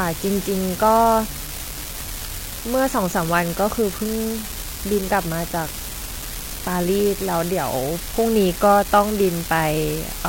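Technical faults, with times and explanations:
Throughout: unreliable data bit. One bit line in the digital path is marginal, so a random share of samples carry that bit wrong. Each wrong bit adds or removes the same fixed step, about -16 dBFS in size. Every error is therefore an identical sharp spike. Scattered at random, these spikes merge into a steady crackle and fizz over the speech. Because the fault lives in the data, not the sound, it continues through the pauses too.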